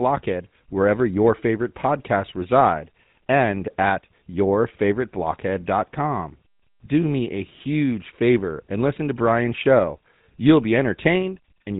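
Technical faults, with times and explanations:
Throughout, GSM full-rate codec: the speech carries a plainly audible buzzy, gravelly roughness and nothing above 3.9 kHz. The voice is rebuilt from a vocal-tract model driven by sparse, regularly spaced excitation pulses, consistent with GSM's 13 kbps full-rate mode.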